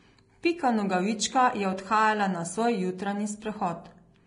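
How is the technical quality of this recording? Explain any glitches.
The recording has heavy codec damage from start to finish. Throughout, the speech sounds hissy and grainy, with nothing above 10.6 kHz, roughened tones and smeared consonant attacks. This is likely Vorbis compression at a low bitrate, around 31 kbps. The codec cuts the top band and quantises the remaining treble so coarsely that fine detail turns into noise.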